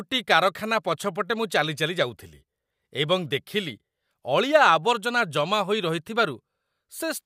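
No technical faults can be heard anywhere in the speech recording. There is nothing to place on a timeline, so no moment in the audio calls for comment.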